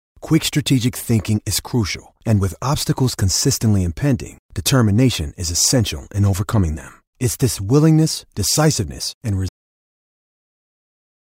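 A speech clip with a cut-off end: at 9.49 s the audio stops mid-sound and falls straight to digital silence, which holds until the clip finishes. The final buffers were never written or played, so nothing decays naturally. On a waveform the trace ends abruptly mid-sound and becomes a flat line. On a spectrogram the energy ends in a hard vertical edge, leaving blank space for the last 1.9 s.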